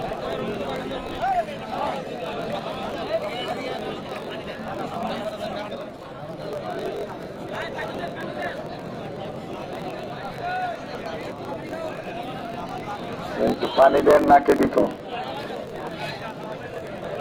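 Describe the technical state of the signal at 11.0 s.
At 11.0 s the block size mismatch (truncated) is present, as it is through the whole clip. The tail of each block, which fits 1024-sample writes, is discarded, giving a 45.9 Hz buzz and playback 1.07 times fast. Unlike a sample-rate error, pitch stays roughly normal.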